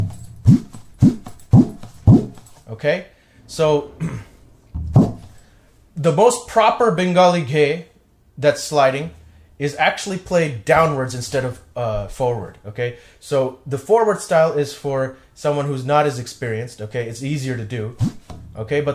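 No technical faults can be heard anywhere here.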